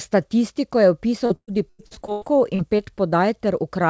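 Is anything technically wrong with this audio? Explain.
Yes. Between 1.26 s and 2.80 s the speech breaks up with repeated packet loss, giving a choppy, robotic sound. Audio packets are going missing or arriving too late, one after another. Each time, the receiver fills the hole by extending the last sound it received, and then the next hole arrives. About a third of that stretch is concealment rather than real signal, and the longest single gap is 117 ms. The result is stuttering speech with fragments missing. The clip's upper band stops at 8 kHz, which fits a wideband call codec such as G.722 at 64 kbps.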